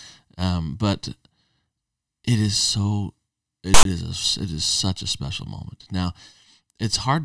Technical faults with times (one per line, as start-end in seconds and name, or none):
3.74-3.85 file tags played as audio